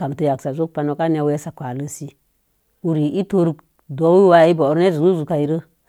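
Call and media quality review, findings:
No faults found in the speech signal; level, timing and continuity hold steady throughout, with nothing that points to a problem in capture, transport or playback.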